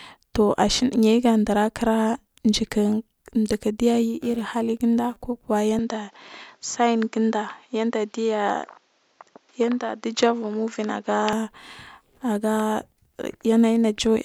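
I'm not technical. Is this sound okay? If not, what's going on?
No. From 5.79 to 11.33 seconds the speech turns duller, then clears again; this is likely an input switched to a poorer device.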